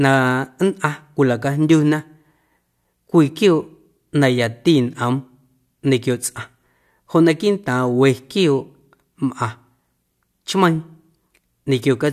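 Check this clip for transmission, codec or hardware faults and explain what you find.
No transmission, codec or hardware faults are audible anywhere in this speech recording.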